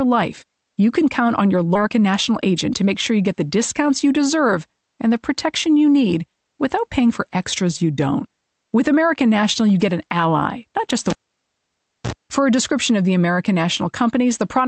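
From 1.89 s to 3.35 s the speech runs at about 105 percent speed. This is a jitter buffer speed-up: the receiver had built up more delay than it targets and trimmed it away by cutting many short pitch-period slices, roughly 70 ms in total. The pitch stays put, so it sounds like hurried talking rather than a sped-up recording, and there are no audible gaps, unlike packet loss.

Between 11.10 s and 12.13 s comes the cable pulled and plugged in. A pop opens almost a second of near silence, then a brief 55 ms burst of 60 Hz mains buzz as the plug tip makes partial contact, and a second pop as the sound comes back. The paired pops and that short hum burst separate it from an ordinary network dropout, which falls silent or gets concealed without clicks or buzz.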